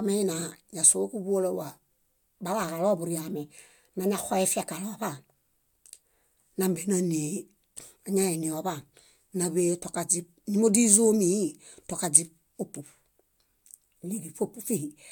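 No technical faults can be heard anywhere in the recording, which keeps a steady, intact signal from its first moment to its last.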